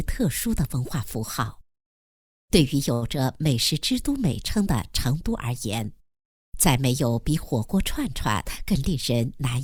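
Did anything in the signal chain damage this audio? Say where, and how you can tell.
Yes. At the network and jitter-buffer stage there is a short stall from a late packet, 2.93 to 3.04 s. The buffer ran dry, and the last sound was stretched for 84 ms with a slight buzz or dip. Unlike packet-loss concealment, nothing is skipped: the audio resumes exactly where it paused.

A jitter buffer speed-up runs from 8.44 to 9.56 s. The receiver drained excess delay by snipping pitch-period pieces, about 70 ms in total, so the sound plays at roughly 106% speed and feels hurried. The pitch stays put, which rules out clock drift or resampling.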